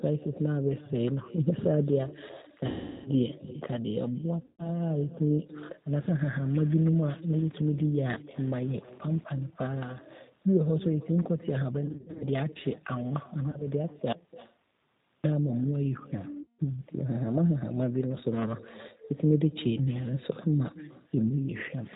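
Throughout, the speech carries an echo with no canceller: a thinner copy about 20 dB down returns roughly a third of a second later, as if the far end's loudspeaker leaks into its microphone. The G.729 codec at 8 kbit/s plainly roughens it, cuts everything above 4 kHz and gives a synthetic edge.

VoIP packet loss concealed by the speech codec appears at 2.66–3.10 s (390 ms lost), 4.45–4.70 s, 11.86–12.24 s (scattered gaps, longest 60 ms), 13.51–13.67 s and 16.42–16.60 s. The decoder extrapolates, so the sound turns into a buzzy tone or coloured noise, fades, then recovers weakly.

From 14.12 to 15.24 s there is an audio dropout to a faint residue: the sound cuts abruptly to hiss about 50 dB down for 1.1 s, likely a break upstream while the later path stayed live.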